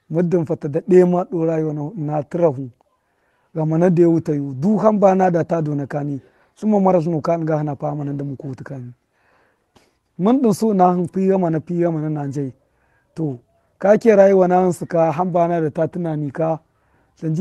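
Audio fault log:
No faults are audible anywhere in this speech.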